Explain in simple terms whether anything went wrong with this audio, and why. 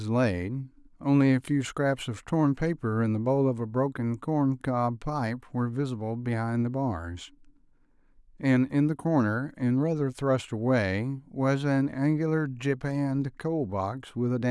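Nothing went wrong; no problems can be heard.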